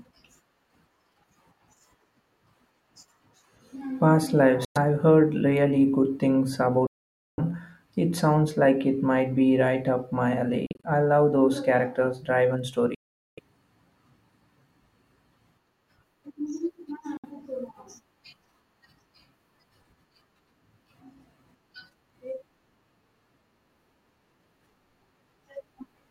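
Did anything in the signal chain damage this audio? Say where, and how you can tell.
Yes. The speech drops to silence five times: 4.65 to 4.77 s, 6.87 to 7.40 s (about 0.5 s), 10.66 to 10.85 s (broken into short holes, the longest about 43 ms), 12.95 to 13.39 s and 17.17 to 17.26 s. The speech then resumes further along, as if it had played on. That points to a likely Bluetooth dropout on the playback link, where late packets were discarded. The hole lengths fit whole packets of about 21 ms. A buffer underrun would pause and then resume where it stopped, with nothing lost.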